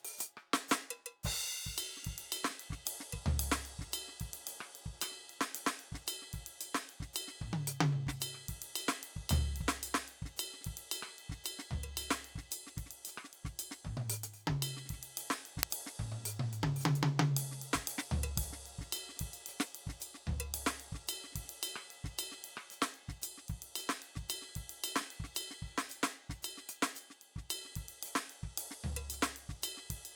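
At 15.63 s the music is interrupted by an uninitialised buffer: a block was sent to the output before any audio had been written into it, so whatever values sat in that memory were played as samples. The result is a loud crack lasting only about 0.67 ms, which fits a 32-sample block. Unlike an ordinary dropout click, it is a crack of unrelated values rather than a gap or step in the music.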